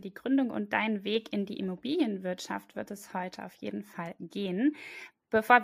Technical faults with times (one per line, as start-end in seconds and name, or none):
0.58-5.28 clock slip clicks